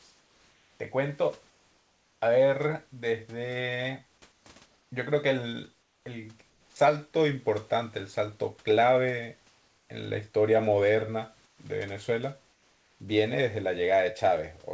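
During the pauses at 0.00–0.80 s, 1.50–2.22 s, 4.32–4.92 s, 5.82–6.76 s, 9.48–9.90 s, 11.46–11.58 s and 12.52–13.00 s, the room background gives way to comfort noise: a steady, featureless hiss with none of the real ambience's texture. Where the level shift is audible, the fill sits about 1 to 5 dB below the genuine room noise, which itself is roughly 38 to 42 dB under the loudest speech. The likely cause is discontinuous transmission: the sender's voice detector stops sending audio during silence, and the receiver synthesises noise shaped to approximate the background.

At 6.72–6.76 s, the end of the fill that began at 5.82 s, speech resumes with an onset clipped by the voice detector. The first 40 ms are missing, so the sound starts abruptly without its soft attack, with comfort noise occupying the gap. The likely cause is the detector reacting late to the return of speech, so those opening moments were never sent. 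Throughout the clip, nothing is heard above 8 kHz, consistent with a G.722 call path.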